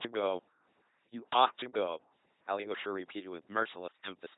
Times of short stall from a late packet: none

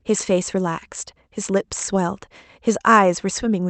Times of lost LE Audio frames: none

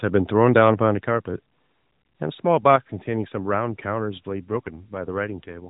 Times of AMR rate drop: 4.32-5.70

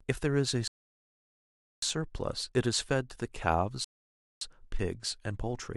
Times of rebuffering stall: 0.68-1.82, 3.84-4.41

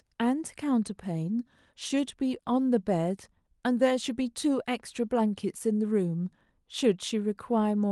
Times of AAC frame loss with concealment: none

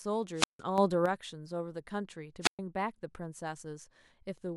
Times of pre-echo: none

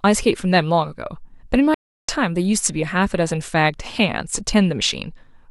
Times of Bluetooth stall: 1.74-2.09

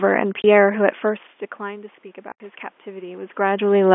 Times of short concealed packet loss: none

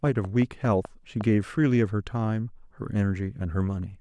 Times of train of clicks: 0.07-1.22

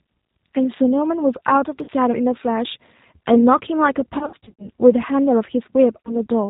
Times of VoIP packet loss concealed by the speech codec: 1.84-1.90, 4.19-4.70, 6.02-6.27

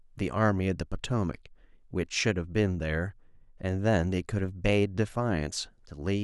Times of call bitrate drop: none

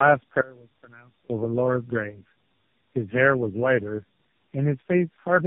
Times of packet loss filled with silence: none

